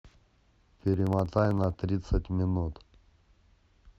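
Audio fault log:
0.05–1.89 s, periodic USB or driver dropouts: a tiny slice of speech, around half a millisecond, is skipped every 63.5 ms, roughly thirty times, leaving a steady ticking that sounds only under signal. The strict regular spacing rules out random clicks or network packet loss.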